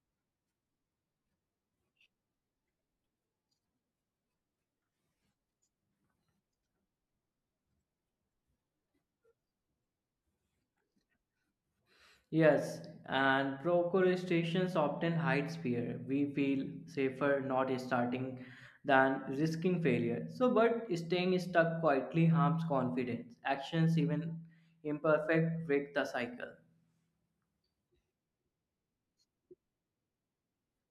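No technical faults can be heard anywhere in the speech recording.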